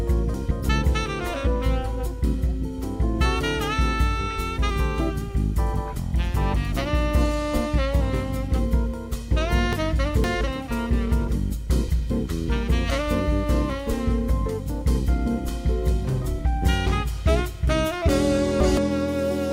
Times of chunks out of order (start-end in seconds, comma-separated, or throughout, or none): 0.34-0.68, 9.73-10.41, 18.09-18.77